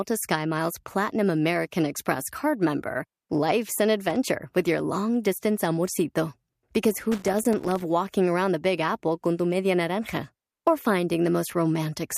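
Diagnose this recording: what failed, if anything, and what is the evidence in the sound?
The failure is in the analogue wiring: loose connector crackle, heard twice in this speech, as a short burst at 4.10 to 4.16 s and a longer scratchy stretch from 6.94 to 7.82 s. A worn or dirty contact is intermittently opening and closing, chopping the signal and adding clicks. On a waveform the bursts look like ragged dropouts studded with spikes; on a spectrogram they appear as irregular vertical broadband streaks.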